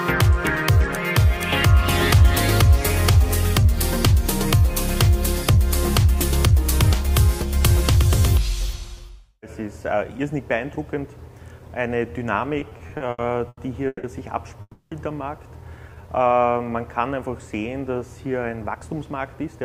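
From 12.59 to 14.05 s the audio drags and stutters: eight brief hitches break the flow, each holding the last sound in place before it moves on, the longest about 160 ms. This is repeated stalls (stutter). Packets kept arriving late or slower than playback, so the jitter buffer ran dry again and again. The receiver padded each gap with continued sound, about 440 ms in all, close to a third of that stretch. Nothing is lost, but the timing is stretched.

At 14.61 s the sound hangs as a fading continuation and dies into a short silence of about 30 ms before resuming at 14.93 s. The hold lasts about 300 ms. This is a call audio freeze, likely caused by packets being held up in transit until the jitter buffer emptied. When delivery resumed, playback picked up where it had stopped. The pause added about 300 ms of delay rather than losing any audio.

Between 15.90 and 16.70 s the audio runs slower at an unchanged pitch, at about 85% of normal speed, and its sounds are drawn out. 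This is a jitter buffer slow-down. With its reserve running low, the receiver rebuilt it by repeating single pitch periods or slivers of pauses many times in a row. Together these repeats added about 125 ms to the passage.

From 18.46 to 19.61 s the opposite happens and the audio runs hurried, at about 111% of normal speed with the pitch unchanged. This is a jitter buffer speed-up. The buffer had collected more audio than it aims to hold, so the receiver shortened the delay by cutting out short pieces of one or a few pitch periods in quick succession. Roughly 150 ms was trimmed across that span.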